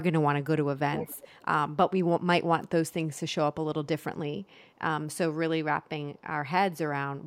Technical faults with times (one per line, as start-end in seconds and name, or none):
0.93-1.45 echo leak
4.43-4.63 echo leak